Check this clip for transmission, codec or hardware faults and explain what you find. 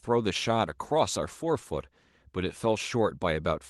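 One transmission fault is audible in the speech. From 0.7 to 2.33 s there is a call bitrate drop. The encoder codes more coarsely, which fits a fall from about 32 to 18 kbps, so the sound turns rough and watery. On a spectrogram, the upper harmonics look blotchy and smeared until the quality recovers.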